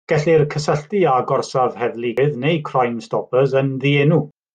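At 2.18 s there's a short blip where the speech briefly breaks up, and the same thing happens again at 4.31 s. Both are damaged data in a compressed stream. Some of the data in the encoded file is wrong, so the decoder can't make sense of the frame at that point. It loses sync, scrambles that bit of output, and then locks back on at the next good frame header.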